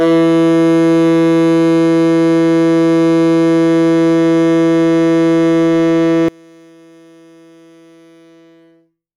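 At 6.28 s the music collapses by about 30 dB and stays that way to the end at 9.17 s, leaving only a faint residue. The likely cause is one channel inverted: with one stereo channel's polarity flipped, everything shared by both channels cancels on a mono sum. On a waveform the envelope shrinks abruptly to a thin sliver; a spectrogram shows all bands dimming together.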